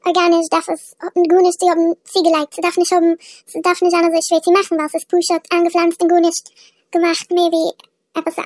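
A wrong sample rate runs through the whole speech clip. Audio captured at 16 kHz plays back at what sounds like 24 kHz with no conversion, so everything moves 1.5 times too fast and sits about 7 semitones high, making the voice sound chipmunk-like and hurried from start to finish.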